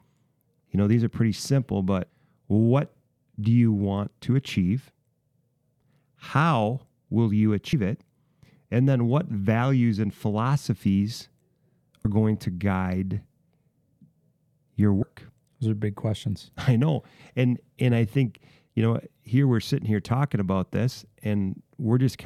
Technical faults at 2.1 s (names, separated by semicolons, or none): compressed frames skipped